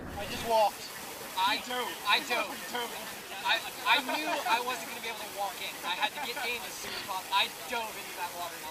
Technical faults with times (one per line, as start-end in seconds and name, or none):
none